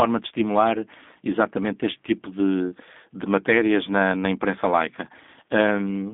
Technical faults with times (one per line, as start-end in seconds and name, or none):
0.00-6.13 G.729 codec